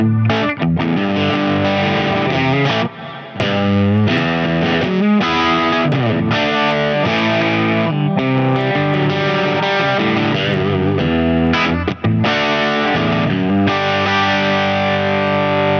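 Gain pumping runs through the whole clip: the gain drops by roughly 5 dB the moment a louder sound arrives and recovers in the quieter gaps, so loud and soft passages sit unnaturally close together. The likely cause is input gain set far too high, with a fast limiter or compressor clamping down on every peak. Unlike a noise gate, the level is pulled down rather than cut to silence. The call's microphone processing limits the band to 8 kHz.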